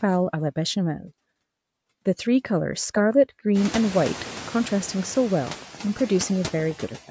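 Noise suppressor artifacts run through the entire speech clip: a suppressor is pulling down, frame by frame, the frequency bands it judges to be steady noise, cutting that noise by about 12 dB. The background therefore sinks in the gaps between words and comes back up underneath them. Around 3.5 s the room noise climbs by about 24 dB to sit roughly 14 dB below the speech, so the suppressor is working against much stronger noise from there on. The call's microphone processing leaves nothing above 8 kHz.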